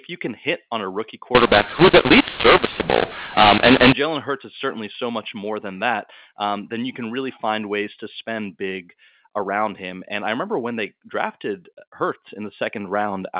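A mu-law and A-law mix-up runs from 1.35 to 3.93 s. The speech was coded with G.711 mu-law but read back with the A-law curve. Because the two logarithmic scales map the same 8-bit codes to different levels, the decoded amplitudes come out scrambled: some too loud, some too soft, and the quietest samples pushed well above silence. That section of speech turns harsh and gritty, and its gaps fill with hiss. The telephone band still stops at 4 kHz throughout.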